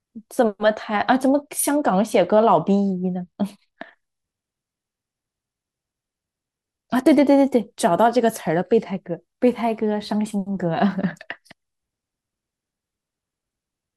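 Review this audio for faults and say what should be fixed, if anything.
From 0.95 s to 3.82 s the speech goes dull and gritty: a Bluetooth SBC bit pool drop. The sound points to the link falling from a bit pool near 31 to about 14, roughly 99 kbps, so the top sub-bands lose their bits and the rest are coarsely quantised. On a spectrogram the upper treble is cut off flat across that span, with speckled noise filling the bands below; the waveform envelope barely changes. Keeping the Bluetooth link uncongested, by reducing distance and interference or using a wired or higher-quality codec path, would prevent it.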